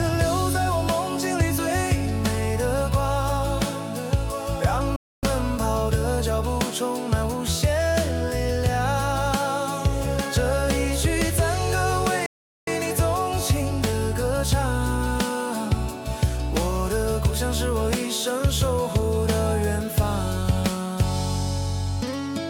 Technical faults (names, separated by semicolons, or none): playback stall